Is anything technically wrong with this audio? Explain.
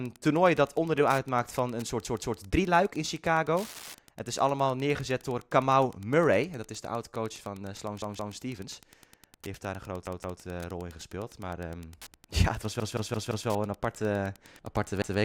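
Yes, two separate problems.

Wi-Fi interference runs through the whole clip as a steady tick about ten times a second, sitting roughly 30 dB under the speech. That spacing matches a 102.4 ms Wi-Fi beacon. A radio close to the audio circuitry is getting picked up and rectified, so each beacon burst turns into a small audible tick. It's quiet.

Repeated buffer faults cause five stutters. A chunk of about 171 ms, which fits an 8192-sample buffer, plays over again with a hard edge at each join. It happens at 2.05–2.39 s and 8.02–8.36 s (two extra plays each), 10.07–10.41 s (two extra), 12.8–13.48 s (four extra, the worst one), and 15.02–15.19 s (one extra). New audio didn't arrive in time, so the device replayed the last buffer. Nothing seems to get skipped, so the speech resumes where it stopped.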